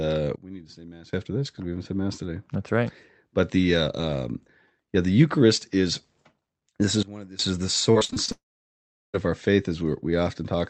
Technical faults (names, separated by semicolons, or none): sudden gain jump; repeated packet loss (robotic sound); long network dropout